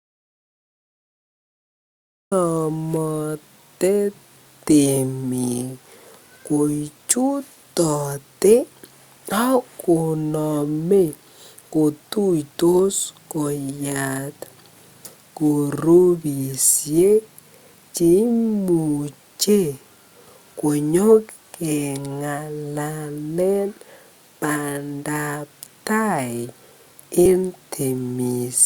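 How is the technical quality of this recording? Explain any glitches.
The recording has two kinds of glitch: a silent opening and two short jumps later in the speech.

Audio dropout to silence: From the very start until about 2.32 s there is dead digital silence, with no room tone or background hiss. The speech then begins abruptly. This sounds like the input was missing while recording was already under way, most likely a disconnected or muted source, so the recorder kept writing silence until the signal returned.

Compressed frames skipped: At 15.05–15.10 s and again at 27.25 s the speech lurches forward. The first jump loses roughly 70 ms of audio, around four frames, and the second loses roughly 100 ms, around five. Those sizes fit a codec using 20 ms frames. Whole compressed frames were dropped or rejected as damaged.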